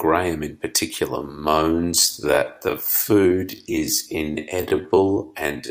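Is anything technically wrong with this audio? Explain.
Yes. From 1.14 s to the end, software likely stretched the speech to fit a longer length, slowing it to 0.63 times normal speed while holding pitch by repeating short pieces. This time-stretched section abruptly drags at unchanged pitch.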